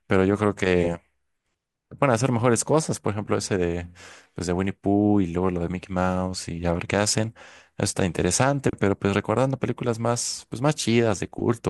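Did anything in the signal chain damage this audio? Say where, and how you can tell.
No, nothing along the way seems to have harmed this speech recording, and there's nothing in it worth pointing to as damage.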